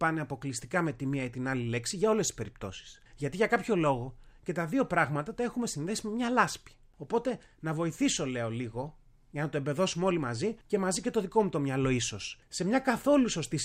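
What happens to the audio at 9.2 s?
Nothing goes wrong at 9.2 s; the speech runs through that moment intact, with no dropout, click or other fault.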